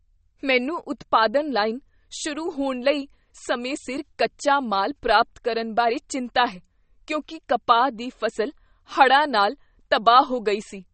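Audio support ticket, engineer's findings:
Band-limited, watery speech throughout, nothing above 8.4 kHz. Likely MP3 compression, starved bits: treble cut, weak lines flickering. Damage fits roughly 32 kbps.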